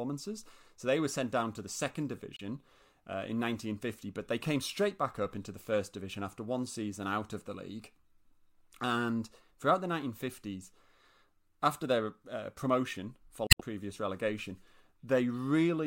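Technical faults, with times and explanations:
2.37–2.41 s and 13.47–13.61 s, damaged data in a compressed stream: just after "down to the second" and "after their uh promotion", a brief glitch as the decoder misreads corrupted frames and resyncs, unlike a dropout's clean silence.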